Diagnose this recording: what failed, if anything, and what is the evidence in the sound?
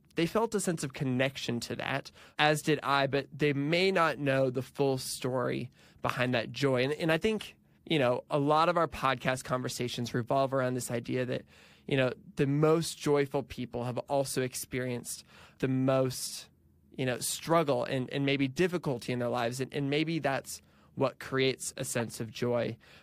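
Codec stage: corrupt frames decoded with flipped bits put energy at wrong frequencies, giving brief blips at 14.08 s, 17.45–17.48 s and 22.00 s.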